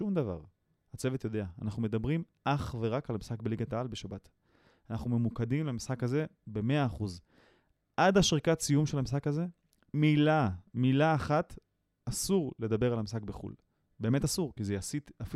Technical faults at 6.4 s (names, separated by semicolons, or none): none